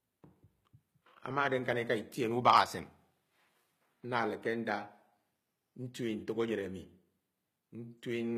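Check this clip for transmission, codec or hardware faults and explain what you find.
One codec fault runs through the whole clip: HE-AAC compression, likely at a low bitrate of about 20 kbps. The encoder codes only the lower spectrum and rebuilds the treble by copying lower bands upward under a coarse envelope. The harmonics no longer line up across the crossover, so s sounds in the speech turn gritty and lispy. The damage is plainly audible, and nothing reaches above 14.9 kHz.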